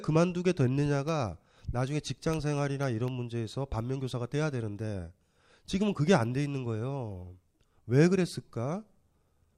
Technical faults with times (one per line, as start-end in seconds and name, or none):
1.08-3.08 periodic USB or driver dropouts